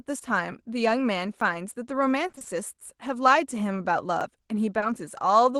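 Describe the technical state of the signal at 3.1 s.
At 3.1 s the signal is intact, with no fault present beyond the ordinary coding of the WebRTC call path it passed through.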